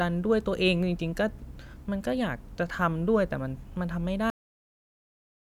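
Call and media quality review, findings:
Cut-off end at 4.3 s: speech stops mid-sound, drops straight to digital silence, no decay. Final buffers never written out. Waveform flatlines; spectrogram goes blank across all bands.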